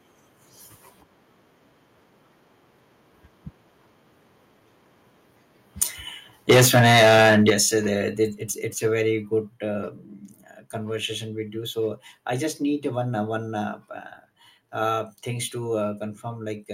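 Microphone overload, likely from input volume set too high, drives peaks past the converter's limit at 5.81 s (about 15 dB over) and again from 6.49 to 7.54 s (about 12 dB over), so the loudest sounds turn harsh and crackling until "uh the the". The microphone volume is then stepped down as software cuts the input in single steps: about 2 dB at 6.51 s, about 7 dB at 7.50 s just before "uh the the", about 2 dB at 8.52 s between "uh the the" and "it's a", and about 2 dB at 9.54 s. The likely trigger is the clipping, and each step makes voice and background abruptly quieter.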